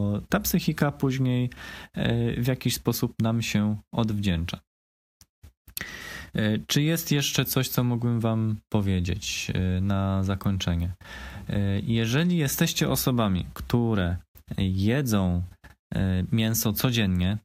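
Nothing in this recording stands out as a technical fault; the audio simply runs along without any glitch worth pointing to.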